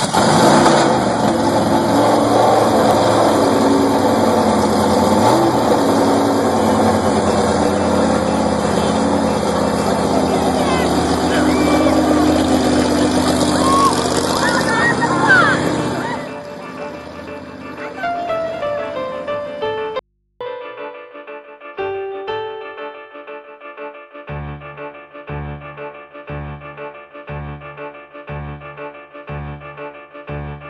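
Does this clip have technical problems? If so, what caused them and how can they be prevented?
Yes: an audio dropout to a faint residue from 19.99 to 20.41 s. For about 0.41 s the sound cuts abruptly to mains hum roughly 50 dB down, likely from a signal break ahead of a still-live input, not a pause or fade. Secure connectors and cables, and use balanced, grounded inputs.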